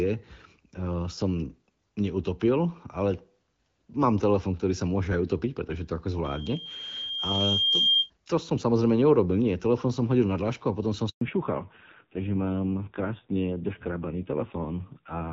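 From 6.24 to 8.10 s, loudspeaker feedback squeal. A 3.2 kHz tone swells over about a second and a half, ending somewhat louder than the speech, just before "to som samozrejme neurobil".

At 11.09 s, after "dlášku a potom som", a handover gap. The speech drops out for 120 ms while the call switches networks.

From 11.21 s to the end, fallback to narrowband. Nothing above 4 kHz remains. The earlier clear HD Voice sound, consistent with AMR-WB around 12.65 kbit/s, turns dull and rough, which points to a low-rate narrowband codec.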